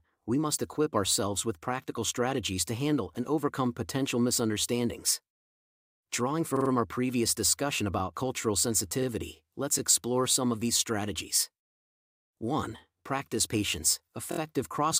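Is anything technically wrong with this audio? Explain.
Yes. Repeated frames occur at 6.55 s, just before "our previous discussion about", where a roughly 46 ms block plays three extra times (adding 139 ms), and at 14.31 s, where a 23 ms block does the same (adding 70 ms). The decoder replays duplicated compressed frames, heard as a short stutter. The 23 ms unit fits a single frame.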